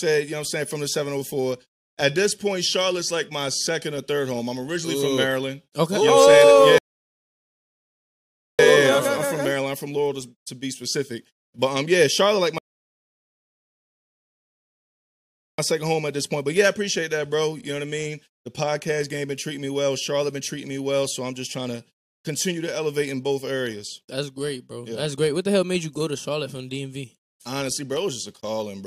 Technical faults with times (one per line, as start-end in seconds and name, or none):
6.78-8.59 rebuffering stall
12.58-15.58 rebuffering stall